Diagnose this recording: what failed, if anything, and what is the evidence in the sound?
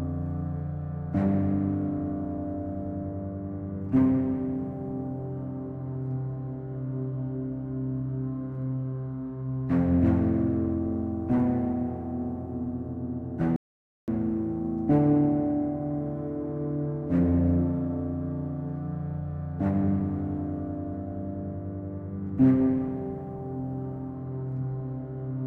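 The sound cuts off abruptly at 13.56 s and returns at 14.08 s, leaving about half a second of dead digital silence with no room tone. This audio dropout to silence likely came from a lost input link or stray mute, while the recorder kept writing zeros.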